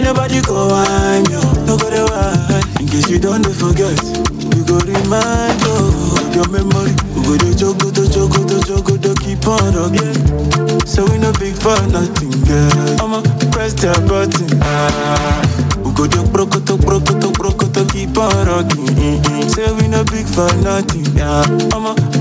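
Gain pumping runs through the whole clip. The swing is roughly 10 dB. The likely cause is input gain set far too high, with a fast limiter or compressor clamping down on each peak and letting go after it. Loud and soft passages end up close in level. The result sounds squashed and breathing. The call codec path adds its own coding noise and leaves nothing above 8 kHz.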